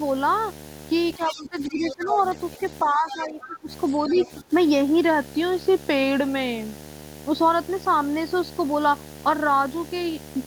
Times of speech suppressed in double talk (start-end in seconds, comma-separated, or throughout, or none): 1.17-2.20, 2.83-3.69, 4.05-4.52